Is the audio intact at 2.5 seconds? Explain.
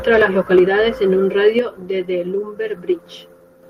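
Yes, the speech at 2.5 seconds plays through cleanly, with no dropout, click, distortion or other fault at that moment.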